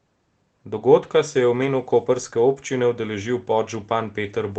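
From 1.61 to 1.67 s, just before "koprske občine", a lost packet rebuilt from error correction fills about 40 ms with rougher, noisier sound in this 8 kHz-bandwidth Opus call.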